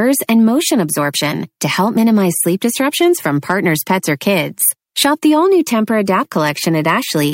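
From 0.29 to 0.48 s the speech shows brief hard clipping: peaks exceed what the signal path can pass by about 2 dB and are sliced flat, giving a light crackle. A heavier stretch follows from 3.02 to 5.25 s, between "minimize sleep" and "all new", overdriven by about 5 dB, so loud syllables turn harshly fuzzy. On the waveform the peaks sit as flat plateaus. The spectrogram shows vertical smears of added harmonics reaching well up into the high kHz range.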